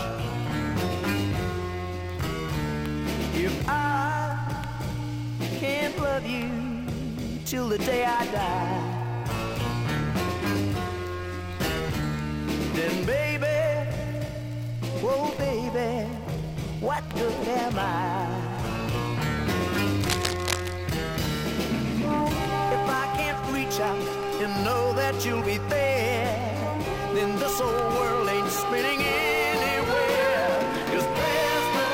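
Cable scratch noise appears from 20.01 to 20.75 s, a burst of dense, uneven scratching and rustling laid over the sound, only slightly quieter than it. The likely cause is a worn cable or connector being moved, its contact resistance jumping rapidly.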